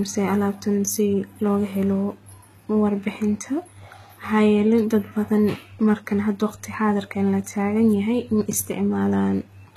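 HE-AAC compression throughout: plainly audible, with treble ending near 14.9 kHz and s sounds turning gritty, likely from band replication at a bitrate around 20 kbps.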